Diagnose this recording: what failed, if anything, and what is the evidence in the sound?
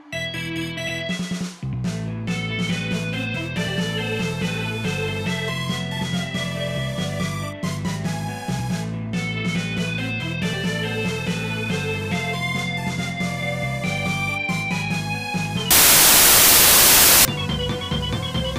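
The sample-format conversion failed: from 15.71 to 17.25 s the reader assembled samples from the wrong bytes, misaligned or swapped, so rapidly varying low-order bits became each value's most significant part. The audio turns into loud, harsh broadband noise.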